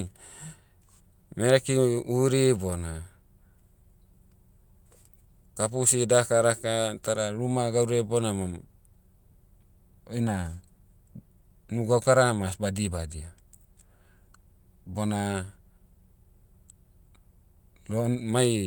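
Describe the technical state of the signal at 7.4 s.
At 7.4 s the speech signal is intact, with no audible technical fault at that moment.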